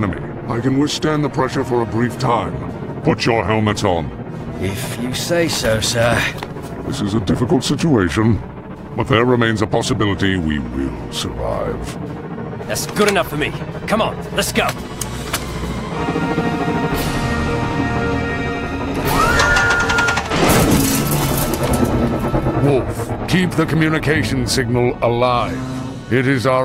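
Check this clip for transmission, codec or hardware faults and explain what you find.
Nothing in the signal points to a transmission, codec or hardware problem; it holds steady and continuous throughout, with no audible faults to report.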